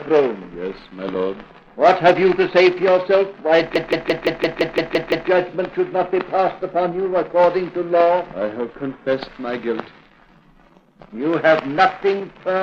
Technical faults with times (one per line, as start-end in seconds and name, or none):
3.75-5.29 system hang loop